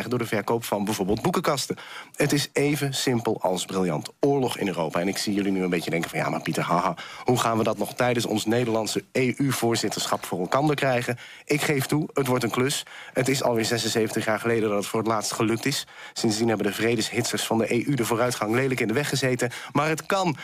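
Nothing in the recording stood out as a technical problem on listening.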